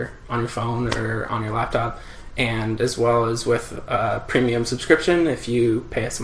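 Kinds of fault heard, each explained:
No audible faults present.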